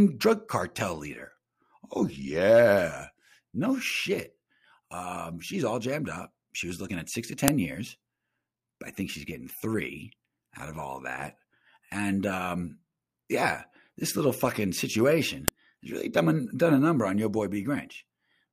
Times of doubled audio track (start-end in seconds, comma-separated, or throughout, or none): none